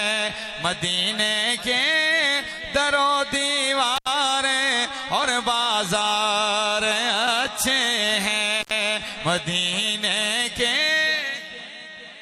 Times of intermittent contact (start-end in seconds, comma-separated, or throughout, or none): 3.96-4.08, 8.61-8.72